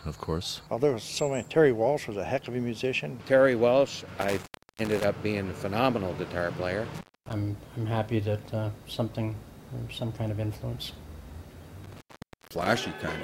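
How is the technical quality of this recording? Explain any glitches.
The recording is marred by three dropouts from an intermittent contact. Near 4.21–5.04 s, 6.95–7.33 s and 11.84–12.67 s, a loose connection briefly opens. The sound cuts out with crackle at the edges, for about 0.34 s, 0.25 s and 0.51 s.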